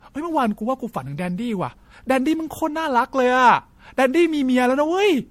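Speech with generation loss throughout: smeared, swirly, hollow texture and blurred attacks, with nothing above 16.5 kHz, likely from around five MP3 passes, consistent with 64 kbit/s.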